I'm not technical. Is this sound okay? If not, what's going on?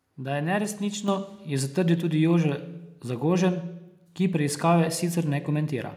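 No, not quite. At about 1.08 s there's a microphone volume stepped up moment: the software cranked the mic's input in one jump, so everything suddenly gets louder.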